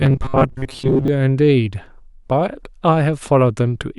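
Speech, and from about 0.01 s to 1.08 s it turns into a rigid, metallic buzz pitched near 133 Hz that only loosely tracks the talking underneath. This is robotic sound from repeated short buffers. The likely cause is audio arriving too seldom, so playback keeps re-sending the last fragment of roughly 7.5 ms, one over 133 Hz, while fresh material is skipped. For most of that stretch, somewhere around two thirds or more, what you hear is these repeats rather than new audio.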